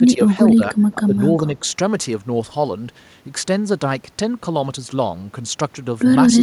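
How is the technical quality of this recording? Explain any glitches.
The opening second of this speech has three quick gain dips: 0 to 0.38 s, 0.55 to 0.74 s and 0.92 to 1.16 s. In each, the voice sinks by roughly 10 dB in short bursts and partly breaks up, so the words seem to flicker in and out. This pattern is likely speech suppressed in double talk. When both ends spoke at once, the echo canceller could not tell this talker from its own loudspeaker echo and turned everything down.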